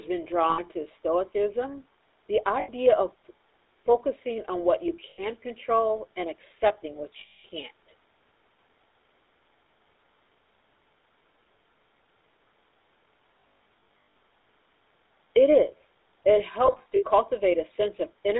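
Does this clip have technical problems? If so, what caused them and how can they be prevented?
Yes. The GSM full-rate codec colours the whole speech clip. The sound is buzzy and gravelly, and it is confined to about 300 Hz to 3.7 kHz, which fits 13 kbps full-rate GSM. The codec rebuilds speech from a coarse pulse excitation, and that creates the roughness. To prevent it, carry the call over a wideband codec instead of legacy GSM.

Lost GSM frames cause brief metallic, ringing holds at 0.5, 2.6 and 5.1 s, each about 0.1 s long. A longer hold runs from 7.2 to 7.45 s. Scattered losses spread over 13.4 to 14.15 s and 16.66 to 17.04 s, with the longest gaps around a tenth of a second. At each loss, the decoder keeps repeating the last good frame. To prevent it, improve radio coverage or signal quality so frames arrive intact.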